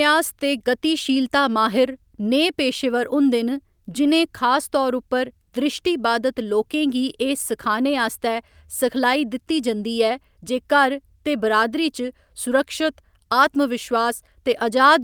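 No technical faults are audible anywhere in this speech.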